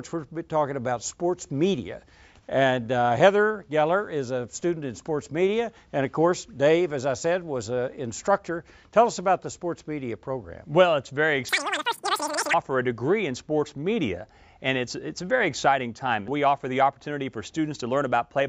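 From 11.49 to 12.54 s, a wrong sample rate makes the sound race by at about 2.76 times normal speed and jump roughly 17.6 semitones higher, which fits 16 kHz material played at 44.1 kHz. A spectrogram shows the harmonics stretched upward and time-compressed across the segment.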